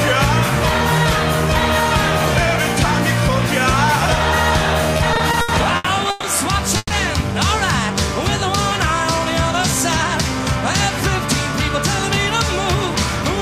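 From 4.97 to 6.25 s, repeated stalls (stutter) make the sound drag through seven brief holds, the longest about 130 ms, as late packets kept draining the jitter buffer. Unlike a single freeze, these are repeated short catches.

At 6.77 to 6.92 s, a call audio freeze holds one sustained fading continuation, ending in about 20 ms of silence, likely from a 130 ms delay jump, before resuming where it stopped.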